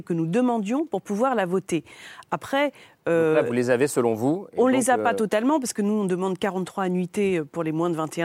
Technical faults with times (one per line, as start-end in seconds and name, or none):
none